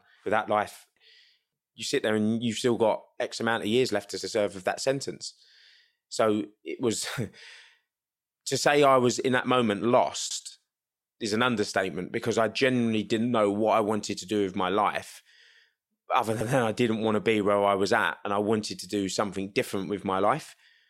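Speech with overlapping chunks: at 4.21, 10.31 and 16.41 s a 100 ms slice replays, stuttering every 6 s; spectrograms show duplicated frames at each join.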